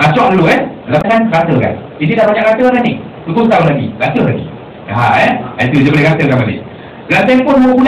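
A short glitch cuts through the sound from about 0.98 to 1.05 s, lasting roughly 70 ms. It is the mark of damaged data in a compressed stream. A stretch of the encoded bytes arrived wrong, lost, zeroed or overwritten. The decoder misread or refused the frames covering that moment and lost sync. It then hunted for the next valid frame header and resumed clean decoding just after 1.05 s.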